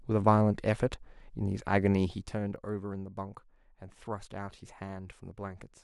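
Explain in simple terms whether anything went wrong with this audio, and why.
Between 1.96 and 2.73 s the speech gets quieter, but not in one even glide. The level drops in small jumps, about ten a second, and each jump leaves a faint click, so a ticking or zipping sound rides on the voice while it fades. That is zipper noise. A smooth level change would sound seamless. Here the volume was stepped down with no smoothing between steps.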